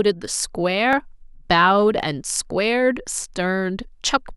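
Clock drift buffer slips run from 0.93 s to 4.21 s in this speech clip: about four short clicks at a steady 1.09 s spacing, audible against the speech. The likely cause is two devices running on independent clocks that disagree by a few hundred parts per million, so the buffer between them slowly drifts toward empty or full. Each time it reaches the limit, a small block of roughly 15 samples is dropped or repeated, producing a click.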